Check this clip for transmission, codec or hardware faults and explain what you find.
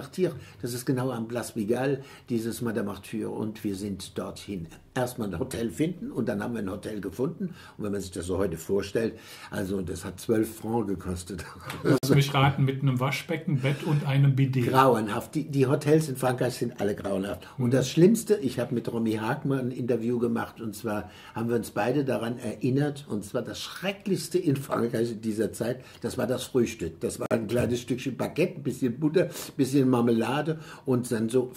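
Two gaps at a join of encoded pieces break the audio, one from 11.98 to 12.03 s and one from 27.26 to 27.31 s, each a gap of about 48 ms. The pieces were encoded separately and butted together untrimmed, so each join keeps the encoder's start-up delay and padded final frame. Continuous sound stops, with edges smeared by the codec, then resumes exactly where it left off. That is what separates this from a packet dropout, where sound goes missing.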